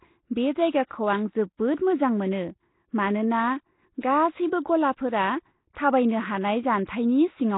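Speech, and the whole clip has a rough, hissy, underwater smear with nothing above 3.8 kHz, heavy damage that's likely Nellymoser compression at something like 16 kbps. You'll also hear pre-echo, soft hiss smearing ahead of sharp attacks, at 0.87–0.91 s, 4.01–4.03 s (between "मोजां मोनो मानोना" and "गासैबो गलाफोरा थाबायनो"), and 6.86–6.89 s.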